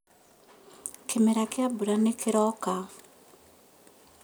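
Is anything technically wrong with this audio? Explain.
No, no technical faults heard.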